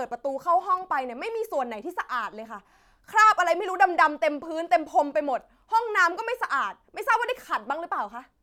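Nothing in this speech recording stands out as a technical fault; it just runs along without any glitches to point at.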